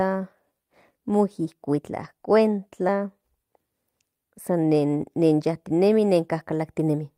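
At 2.03 to 2.05 s, a lost packet rebuilt from error correction: about 20 ms of speech, consistent with a single dropped packet, is filled from the low-bitrate copy carried in the next packet. There is no gap, but that brief stretch sounds rougher and noisier.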